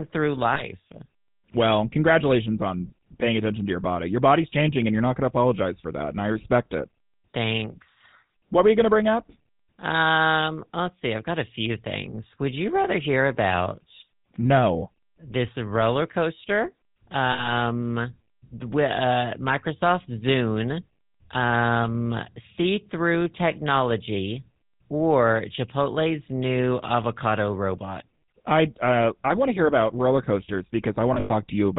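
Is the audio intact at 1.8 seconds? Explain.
No. At 1.8 seconds, as throughout the speech, the signal has passed through the GSM full-rate codec, consistent with its 13 kbps mode. The codec models the vocal tract as a filter and drives it with a sparse train of regularly spaced pulses, keeping only every third excitation sample, and it discards everything above 4 kHz. The result is plainly audible: a dull, band-limited sound with a buzzy, gravelly roughness.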